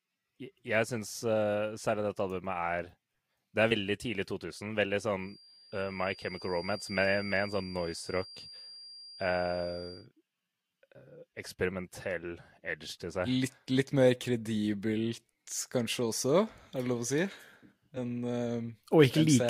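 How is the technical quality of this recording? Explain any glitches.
The speech in this recording has two kinds of fault: brief skips where compressed audio is missing, and a faint whistle through the middle section.

Compressed frames skipped at 3.70 s, 10.6 s and 17.96 s: whole blocks of coded audio never reach the output, so the speech jumps ahead by roughly three frames (about 70 ms), one frame (about 20 ms) and two frames (about 50 ms).

Feedback whistle from 5.16 s to 10.09 s: a thin, steady tone at 4.8 kHz sits about 20 dB below the speech, swelling and fading slowly in level. This is likely a loudspeaker-to-microphone loop held right at the edge of feedback, sustaining one frequency without running away.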